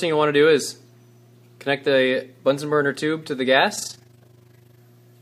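From 3.76 to 4.84 s the sound takes on a rough flutter: overlap-add ripple, where windowed frames are rejoined with overlaps that don't sum evenly, so level dips about 11 dB around 30 times a second. The waveform shows a regular scalloped envelope; a spectrogram shows matching vertical banding.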